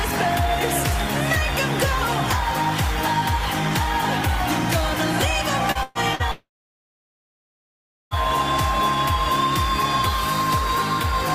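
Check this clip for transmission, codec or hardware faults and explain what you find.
Several transmission faults cluster between about 5.7 and 8.1 s, all pointing to packets lost on the way to the receiver.

Short concealed packet loss at 5.71 to 5.78 s and again at 6.15 to 6.22 s: about 40 ms of audio failed to arrive each time, and the decoder extended the preceding sound to cover it. The result is a brief smear or wobble rather than a clean cut.

A burst of packet loss at 5.83 to 5.98 s: roughly 120 ms went missing in a row. The receiver stretched the last sound across the gap while fading it down, so a held buzz or dying hiss replaces the lost audio, and playback resumes further on.

From 6.31 to 8.14 s, about 1.8 s of audio is absent. Concealment carries the last sound for a short moment, then fades to about 1.65 s of silence before sound returns with that stretch gone. A long network dropout is the likely cause.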